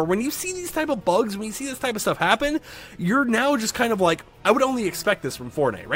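No technical faults can be heard anywhere in this clip. There is no moment where anything goes wrong with the sound.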